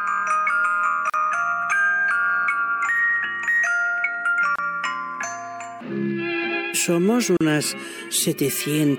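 Three brief dropouts break otherwise continuous sound: at 1.10 s a hole of about 39 ms, at 4.56 s about 30 ms, and at 7.37 s about 38 ms. Each has smeared edges, and the sound resumes exactly where it stopped. These are gaps at a join of encoded pieces: each segment was encoded separately, and its leading encoder delay and padded final frame were left in when the pieces were butted together.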